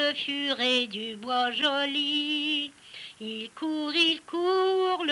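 Nothing in the recording caught the ear as a problem at any point while listening.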